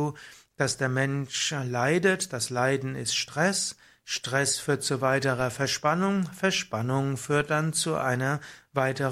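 Speech, with two DC steps, at 5.40 s and 7.40 s. At each point the waveform's zero line jumps suddenly by about -32 dBFS. Each jump is heard as a low thump under the speech, which carries on unchanged. The offset does not hold. It drains away in the manner of a 20 Hz high-pass, so each thump is brief. A converter recalibrating, or an offset input being switched in, would produce this.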